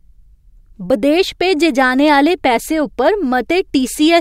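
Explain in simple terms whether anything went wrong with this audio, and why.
Nothing went wrong here: the speech signal is intact, with no dropouts, distortion, glitches or other technical faults anywhere in the recording.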